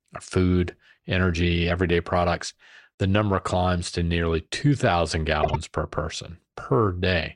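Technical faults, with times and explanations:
5.43–5.56 s, frames out of order: two adjacent blocks of about 52 ms each were decoded in swapped order, so this 0.13 s stretch plays its second half before its first. The result is a brief garbled flutter. The block length points to runs of roughly two codec frames. Nothing is missing, so the timing after the fault stays aligned.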